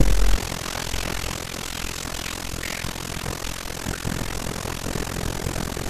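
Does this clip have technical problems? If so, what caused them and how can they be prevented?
Yes. Overlap-add ripple runs through the whole speech clip. The level dips by about 60 dB around 40 times a second. This gives a harsh, robotic flutter. The frame windows overlap without summing to constant gain. Prevent it by choosing window and hop sizes that sum flat.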